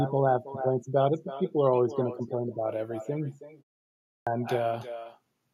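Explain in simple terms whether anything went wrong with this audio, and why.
Nothing cancelled the echo: the far end's loudspeaker fed this speech back into its microphone. That is an echo with no canceller, so every phrase is trailed about a third of a second later by a fainter, hollow copy.

At 4.07 s, after a half-second pause, the output device was slow to wake back up. This clipped start after a pause swallows about 0.2 s, so the speech begins abruptly without its opening sounds.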